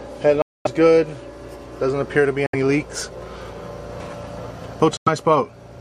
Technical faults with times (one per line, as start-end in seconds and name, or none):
0.42-0.67 Bluetooth dropout
2.46-2.55 Bluetooth dropout
4.97-5.08 Bluetooth dropout